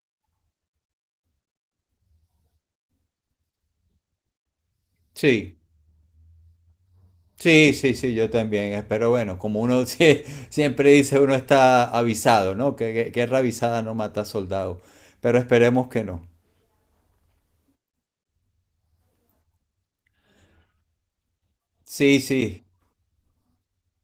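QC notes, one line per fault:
No faults found; the speech passes through Opus voice coding at 24 kbps in hybrid mode with full bandwidth retained and only light coding wear.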